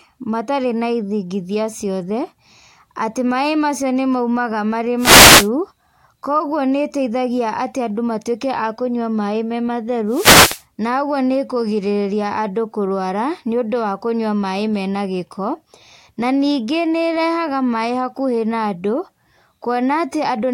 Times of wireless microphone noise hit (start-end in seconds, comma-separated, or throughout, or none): 4.98-5.49, 10.08-10.64